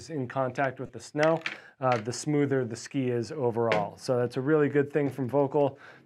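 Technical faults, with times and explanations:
0.86 to 0.89 s, lost LE Audio frames: For about 30 ms the Bluetooth LE Audio link delivered nothing, a gap that fits four 7.5 ms LC3 frames. With no data to decode, the LC3 decoder filled the hole by repeating the last good spectrum with its phase signs scrambled. Any tonal content in that stretch therefore loses its clear pitch and becomes a brief noisy smear before normal decoding resumes.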